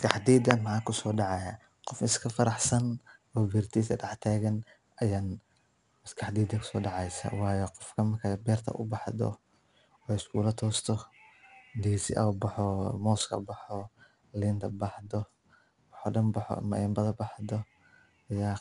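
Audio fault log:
throughout, 4-bit ADPCM compression: each sample is coded as a coarse 4-bit step from a predicted value, so a plainly audible gritty hiss tracks the speech level and roughens sharp onsets; nothing reaches above 10.6 kHz, which fits an 89 kbps stream.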